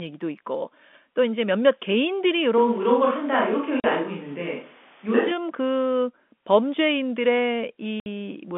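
From 2.58 s to 5.31 s the sound turns suddenly roomy and hollow, thinner in the bass, with background noise rising to roughly 30 dB below the speech at about the same loudness. It snaps back just as abruptly, most likely a switch to a distant microphone after the close one dropped out.

Inside that stretch, at 3.80 s to 3.84 s, a 40 ms hole of dead silence opens, and later, at 8.00 s to 8.06 s, a 60 ms gap does the same. This is packet loss filled with silence. The lengths fit lost 20 ms packets replaced by nothing, all within the 200 Hz to 3.5 kHz band of the G.711 telephone line.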